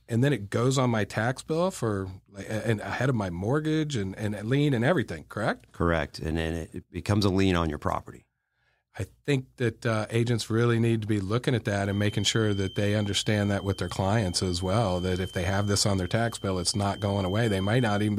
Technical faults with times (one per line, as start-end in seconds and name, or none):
11.78-18.19 feedback whistle